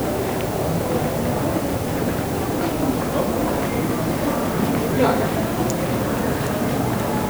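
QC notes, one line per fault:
Throughout: low bit depth with dither. A constant, even hiss sits under the sound from start to finish, loud enough to be only about 15 dB below it. Its level and texture stay the same whether the sound is loud or quiet, with no grit, crackle or distortion riding on it. The signal carries very few amplitude steps, which fits 6-bit quantisation. Dither added before rounding has turned that coarse rounding error into steady white noise instead of audible distortion.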